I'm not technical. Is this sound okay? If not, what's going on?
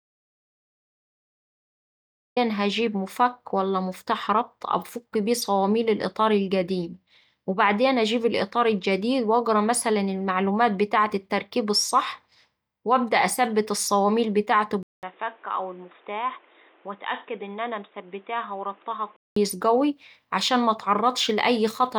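No, there are two problems. The clip opens in dead silence: an audio dropout to silence runs from the very start until about 2.37 s, when sound suddenly appears at "هجيب مفك ولا مفتاح". The input was likely cut off, so anything said then is lost.

Later, right after "وأبدأ أثبت الصواميل بتاعته", there's a brief gap of about 0.2 s, then from 14.83 s to 19.36 s the sound turns muffled, noticeably quieter and a bit noisier, with nothing above 3.8 kHz. That's likely an input switched to a poorer device, and it clears up at "قوي عشان".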